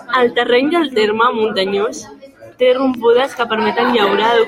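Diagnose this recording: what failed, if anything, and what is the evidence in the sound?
A train of clicks runs from 2.94 s to 4.37 s, starting just after "del terme muntanyós té" and continuing to near the end of the clip. The clicks are similar in shape and evenly spaced at about 4.2 per second, seven or so in all, peaking roughly 5 dB above the speech and audible in the gaps as well. Such a steady, repeating impulse is likely interference coupling into the analogue wiring or a faulty connection or power supply.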